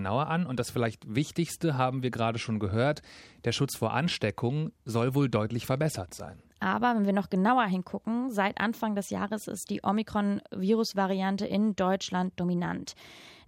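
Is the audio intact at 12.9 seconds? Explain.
Yes, the speech at 12.9 seconds plays through intact, with no dropout, click, distortion or other fault at that moment.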